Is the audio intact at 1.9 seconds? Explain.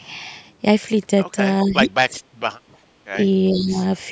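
No. Speech suppressed in double talk runs from 1.64 to 2.14 s: the voice dips sharply, by as much as about 20 dB. The likely cause is an echo canceller that, with both sides talking at once, couldn't separate its own talker from loudspeaker echo and turned both down.

An echo leak also sits inside that window, from 1.85 to 1.89 s. A faint copy of the voice returns about 423 ms late, at roughly 20 dB below the speech. It likely comes from a loudspeaker's echo canceller letting through some of what its microphone picked up.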